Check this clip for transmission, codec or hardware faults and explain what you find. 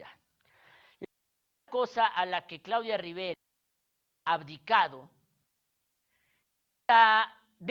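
Three digital wireless dropouts cut into this speech. They run from 1.05 to 1.68 s (about 0.63 s), from 3.34 to 4.26 s (about 0.92 s) and from 6.43 to 6.89 s (about 0.46 s). Each time, the receiver lost too much of the data stream and muted itself with a very quick fade. What you hear is a clean hole of near silence, with no noise burst on either side. On a waveform these show as flat gaps, and on a spectrogram as empty vertical bands.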